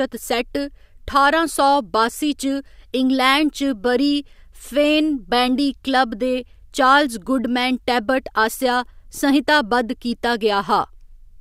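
No technical faults can be heard anywhere in the recording, with the signal holding steady and intact throughout.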